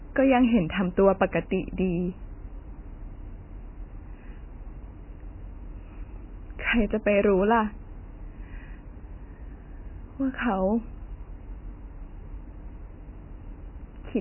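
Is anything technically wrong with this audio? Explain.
Yes. The whole recording has heavy damage consistent with MP3 compression. Nothing comes through above about 3 kHz, so the speech sounds dull and boxed-in, and there's a watery, swirly quality as quieter detail flickers in and out. That's likely an MP3 encoder starved of bits, with damage this heavy pointing to something as low as 16 kbps. It chops the treble at a fixed cutoff and drops weaker frequency components frame by frame, which produces exactly that unstable, smeared texture.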